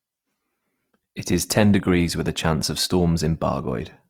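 Throughout, the sound points to a bitrate near 24 kbps, likely from Opus compression in its music mode, which leaves this full-band speech plainly rough, grainy and noise-filled.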